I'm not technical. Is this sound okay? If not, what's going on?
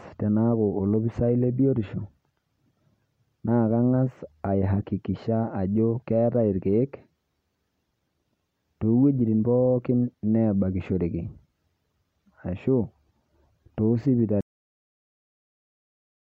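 No. The speech has a cut-off end: at 14.41 s it stops mid-sound and drops straight into dead silence until the clip finishes. Unlike a natural pause or a fade-out, nothing trails away; the last stretch of audio simply never got recorded or played.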